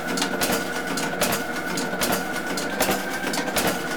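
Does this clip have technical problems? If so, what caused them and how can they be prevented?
Yes. A drift correction step runs from 2.71 to 3.54 s. Speed rises about 6% and pitch about a semitone, then snaps back. A clock-matching buffer likely jumped its rate. Gradual resampling against one shared clock prevents it.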